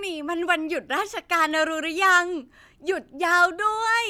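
Speech, with no audible faults.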